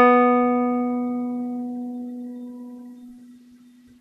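A music clip, with nothing technically wrong with it.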